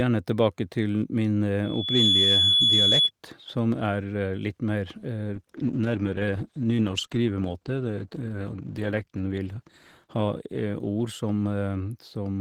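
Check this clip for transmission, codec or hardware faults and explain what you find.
Two faults are present: a feedback squeal early on and a bitrate drop for the rest of the speech.

From 1.63 to 3.11 s there is loudspeaker feedback squeal. A microphone picks up its own loudspeaker, and the loop gain tops one at 3.4 kHz. That tone swells over roughly 0.4 s into a shrill whistle about 5 dB above the speech.

From 5.41 s to the end there is a call bitrate drop. The bandwidth estimate fell and the encoder was starved of bits. The speech turns rough, watery and muffled, which fits a fall from 48 to 13 kbps. It sits at its worst for about 4.3 s.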